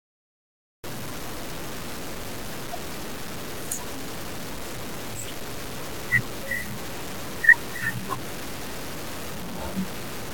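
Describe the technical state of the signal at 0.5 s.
At 0.5 s the signal is digital silence, part of a cut-off start. Nothing is heard from 0 to 0.84 s. The recording began late, so the speech enters abruptly at 0.84 s with no natural attack.

Grainy distortion that tracks the signal runs through the whole clip, though at this moment there is only silence. It is likely low bit depth without dither, with samples truncated to about 6 bits. The rounding error is nearly as loud as the speech itself.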